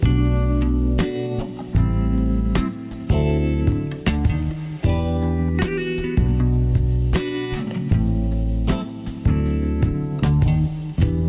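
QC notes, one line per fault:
No faults found. Nothing in the audio calls for a note.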